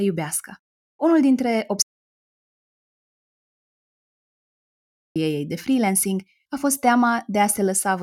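An audio dropout to silence runs from 1.82 s to 5.16 s in this speech recording, wiping out about 3.3 s. The speech stops abruptly mid-flow and resumes just as suddenly, and in between there is silence with no trace of room tone or background. That dead gap points to the input signal being lost, likely through a disconnected device, a failed link or an accidental mute, while recording carried on writing silence, so whatever was spoken there is gone.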